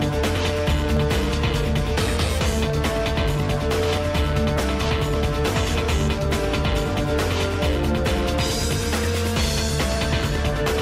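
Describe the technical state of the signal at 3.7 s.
At 3.7 s the signal falls within clock drift buffer slips, running from 0.37 to 10.56 s. Clicks recur every 0.6 s. Two mismatched device clocks likely drop or repeat small sample blocks.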